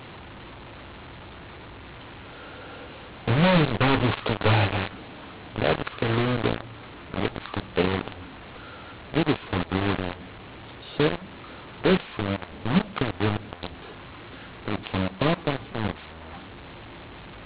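From start to finish the speech carries a mu-law and A-law mix-up: telephone audio coded with the mu-law curve of G.711 is being decoded with the A-law curve, so every 8-bit code maps to the wrong level. Loud and soft parts are rescaled unevenly, giving a harsh, gritty distortion, and the pauses never go quiet but fill with hiss. Ordinary clipping bites only on peaks; here even the softest moments are corrupted.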